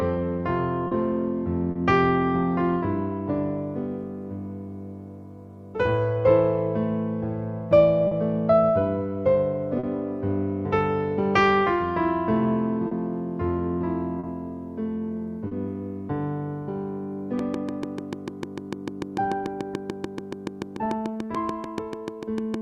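Short concealed packet loss occurs at 0.87, 1.71, 8.07, 9.79, 12.87, 14.19 and 15.47 s. Each time, 40 ms of audio arrived too late and the decoder extrapolated the preceding sound before blending back, giving a brief smear or wobble. On a spectrogram, harmonics run unnaturally flat for a few hundredths of a second.

A train of clicks starts at 17.39 s and runs to the end at a regular 6.8 per second, well above the surrounding sound and audible in pauses. Interference from nearby equipment or a faulty connection is the likely cause. The waveform shows evenly spaced spikes, and the spectrogram shows thin vertical broadband lines.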